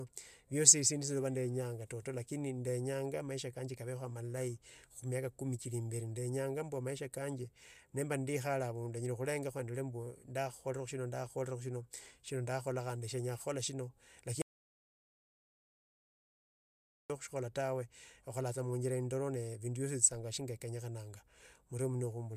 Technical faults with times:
14.42-17.10 audio dropout to silence

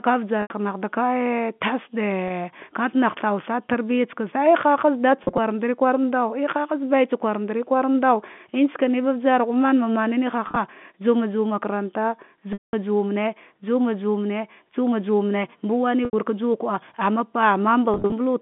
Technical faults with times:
0.42-0.50 packet loss with pitch repetition
2.28-2.30 packet loss with pitch repetition
5.24-5.38 packet loss with pitch repetition
10.46-10.56 packet loss with pitch repetition
12.53-12.73 packet loss with pitch repetition
16.05-16.13 packet loss with pitch repetition
17.94-18.12 packet loss with pitch repetition

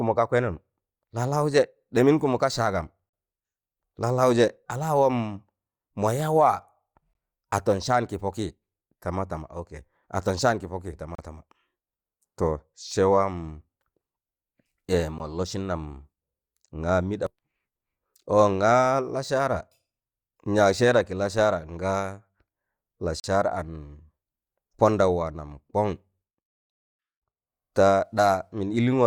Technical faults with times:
3.09-3.13 gap between stream segments
7.13 gap between stream segments
11.15-11.18 gap between stream segments
15.18 gap between stream segments
23.20-23.24 gap between stream segments

